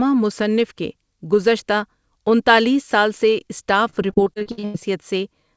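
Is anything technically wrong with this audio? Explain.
Yes. From 3.90 s to 4.76 s the speech suffers repeated packet loss, which gives it a robotic sound. About ten gaps hit this stretch in quick succession, the longest about 90 ms. Each time, the receiver patches the hole by extending the last sound it received. About 320 ms, or 37% of the stretch, is concealed this way. The result is choppy speech with pieces missing. The call path's band limit, with nothing above 8 kHz, fits a wideband codec such as G.722.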